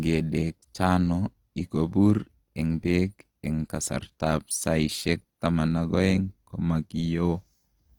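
Likely Opus compression at a low rate, around 24 kbps in music mode, fills starved bands with noise throughout, leaving the speech rough and grainy, though content reaches 20.2 kHz.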